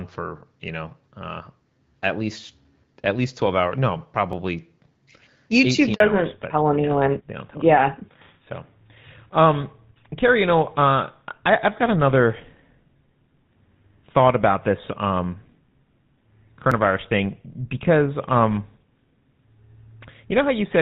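At 4.33 s the sound jumps forward by a few milliseconds with no silence in between. This is likely a dropped buffer (overrun): the software fetched its samples late, the hardware overwrote them, and the two sides were spliced together.

From 5.94 to 6.00 s the voice fades out and there are 60 ms of silence. This is a handover gap: the call was being moved to another network, no speech frames arrived during the switch, and what was said then is lost.

From 6.00 s to the end the voice is duller and rougher, with nothing above 4 kHz. This is a fallback to narrowband. The clearer HD Voice sound before this point was replaced by an older codec, which fits GSM full rate.

At 16.72 s there is a second jump in the sound, this time losing about 10 ms. It is likely another dropped buffer.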